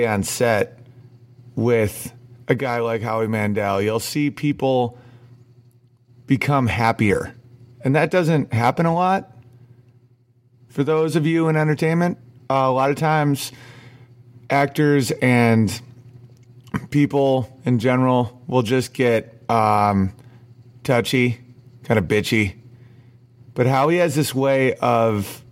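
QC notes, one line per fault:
No faults heard in this audio.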